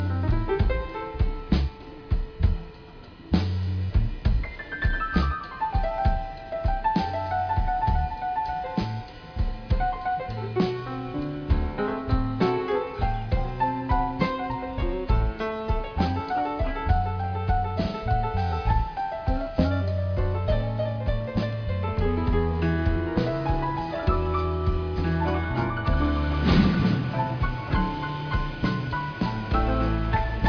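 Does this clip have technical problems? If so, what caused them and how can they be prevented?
No, the signal shows no technical faults anywhere in the recording, so there is nothing that needs preventing.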